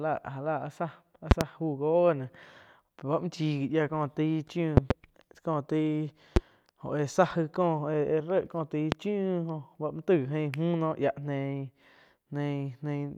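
Loud pops hit the speech at 1.31–1.44 s and 4.77–4.93 s as double pops. Single pops follow at 6.36–6.39 s and 8.92–8.95 s. Each jumps far above the speech level. A likely voltage pulse, from a plug, switch or static, produced sharp thumps while the speech continued underneath.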